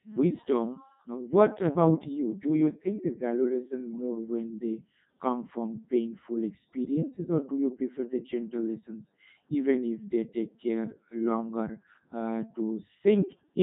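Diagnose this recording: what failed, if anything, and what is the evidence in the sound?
Codec 2 vocoder damage throughout, at the codec stage: the speech is robotic and buzzy, which fits Codec 2's 3.2 kbit/s mode, where only pitch, voicing, energy and envelope are sent and resynthesised from sine waves.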